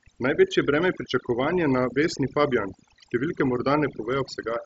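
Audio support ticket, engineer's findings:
Overdone noise removal, throughout the speech. Background gated to near silence with isolated twinkling specks. Voice low-level detail stripped. Spectrogram: patchy, blotchy time-frequency holes, scattered bright dots in the gaps. Waveform: unnaturally flat floor between phrases. Cause: noise suppressor set too aggressive, muting any band close to its noise estimate. Bandwidth ending near 7.7 kHz fits the wideband Bluetooth headset link.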